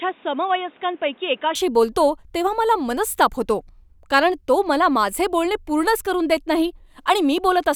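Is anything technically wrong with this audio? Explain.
Yes. From the start to 1.55 s, the speech sounds like an input switched to a poorer device, likely a change to a weaker microphone or a headset's call profile. Nothing reaches above 3.8 kHz, so the sound is dull and boxy. It is also a few decibels quieter, with a new noise floor about 30 dB below the speech. At 1.55 s the full band returns with no silence, just before "बोलतो तेव्हा मला मनस्ताप".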